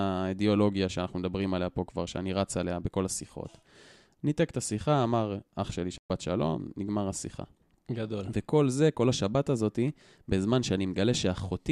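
At 5.98 s the receiver stopped getting decodable frames and muted its output until valid data returned. The result is a digital broadcast dropout: the speech cuts to silence for about 120 ms, which fits a handful of lost frames, and resumes at 6.10 s with that stretch simply missing.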